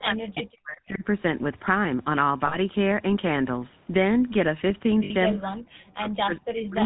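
GSM full-rate codec coloring runs through the whole clip: the speech is modelled as a vocal-tract filter fed by coarsely spaced pulses, giving a buzzy, gravelly roughness with no content above 4 kHz, which fits the 13 kbps full-rate coder.

Speech suppressed in double talk affects 0.0 to 1.04 s. The talker's level dips, falling by as much as about 40 dB over roughly a second, likely because an echo canceller clamped down while both sides were talking.

Lost GSM frames occur at 0.70 s (40 ms), 2.46 s (60 ms) and 5.04 s (60 ms). Each gap is filled by repeating the settings of the last good frame, heard as a brief rough, metallic ringing in place of the missing sound.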